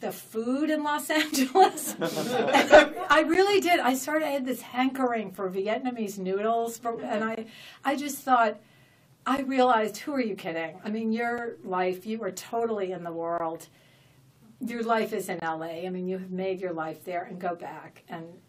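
Gaps between stream segments occur at 1.31, 3.34, 5.35, 7.35 to 7.37, 9.37, 11.38, 13.38 to 13.40 and 15.40 to 15.42 s, each a hard-edged hole of silence between about 5 and 22 ms. They repeat roughly every 2 s because the timestamps of consecutive 2 s segments don't quite meet, and the player pads each mismatch with silence. Nothing is dropped; the sound is simply interrupted and pushed slightly later at each boundary.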